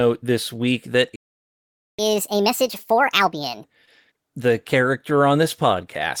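At 1.16 s, just after "this week that", the player likely ran short of data or had its thread held up, so output stopped. This playback stall leaves about 0.83 s of dead silence in mid-speech until 1.99 s, when sound resumes.

To recover the lost time, the player then plays its backlog faster by resampling, a catch-up at higher speed from 1.99 s to 3.64 s. At 1.5 times normal speed, the speech is hurried and raised in pitch by roughly seven semitones before dropping back to normal.

Between 3.85 s and 3.89 s, a short concealed packet loss occurs. About 20 ms of audio arrived too late for the decoder, and the receiver filled the gap by extending the preceding sound before blending back in. The result is a brief smear or wobble in the speech.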